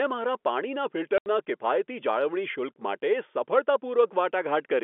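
At 1.18 s the speech drops abruptly into silence for 80 ms, resuming at 1.26 s, with a hard edge at each end. This is packet loss filled with silence: missing audio was replaced by nothing, and the gap fits four 20 ms packets.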